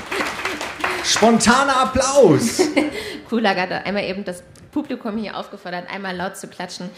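No audible faults turn up anywhere in the recording.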